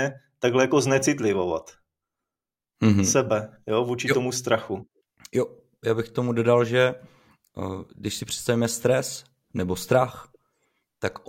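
Nothing in this recording stands out as a technical fault; it just runs along as ordinary speech with nothing breaking in to trip up the listener.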